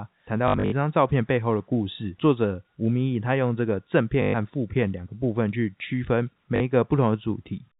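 Speech over a telephone band cut off at 4 kHz stutters robotically at 0.48–0.72 s, 4.22–4.34 s and 6.56–6.60 s: packet loss with the last packet repeated, where lost audio is replaced by replays that buzz at 50 Hz, fitting 20 ms packets. The waveform shows identical repeated blocks.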